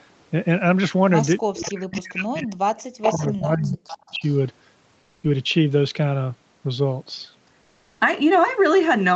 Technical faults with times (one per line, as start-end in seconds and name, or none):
1.45-4.22 speech suppressed in double talk
1.62-2.25 echo leak
2.79-3.13 echo leak
3.89-4.38 echo leak
4.99-5.23 comfort noise in place of the background
7.61-7.99 comfort noise in place of the background